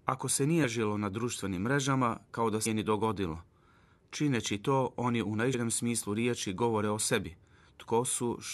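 Damaged data in a compressed stream strikes at 0.63, 2.65 and 5.53 s. Each time the decoder misreads corrupted frames and loses sync until it finds a valid frame header, so the speech breaks for under 20 ms with a chirp, squawk, click or short hole.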